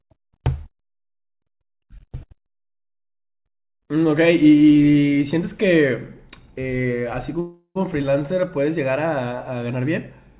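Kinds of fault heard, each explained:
Call audio freeze: from 7.4 to 7.77 s the sound hangs as a fading buzz into brief silence, then resumes unbroken; likely packets held up, draining the jitter buffer.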